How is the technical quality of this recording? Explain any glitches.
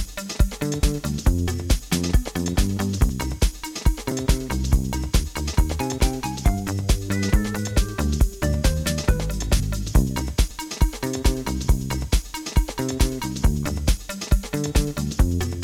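The recording has five small forward jumps, at 0.83, 3.09, 4.12, 4.93 and 10.51 s. These are likely dropped buffers (overruns). The capture fell behind, so roughly 10 to 30 ms of audio was lost each time and the two sides were spliced together without any gap.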